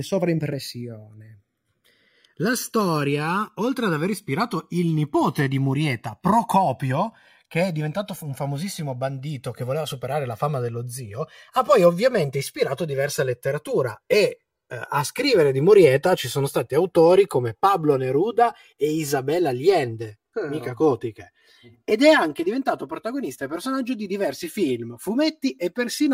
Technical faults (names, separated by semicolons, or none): channels drifting apart